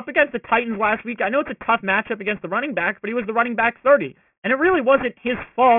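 Right from the start and all the way through, this speech has aliasing. It sounds like it was dropped to around 6 kHz with no filter first, so energy above 3 kHz folds back down to about 15 dB under the voice, leaving gritty, metallic sibilants.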